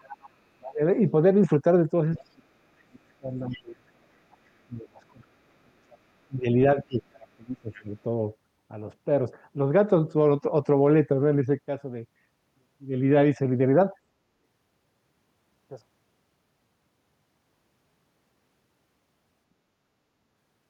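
Other side's voice leaking through opens the clip at 0–0.26 s and recurs at 2.15–2.21, 3.51–3.6, 4.31–4.37 and 7.74–7.83 s. These are faint scraps of a second voice, roughly 20 to 35 dB below the speech, likely loudspeaker echo the canceller left behind.

Interleaved with these, speech suppressed in double talk strikes at 0.58–0.81, 2.24–4.23 and 4.66–7.93 s. The talker's own voice sinks by some 20 to 30 dB, likely the canceller turning everything down while both sides spoke. Unlike leakage, the main voice itself drops away.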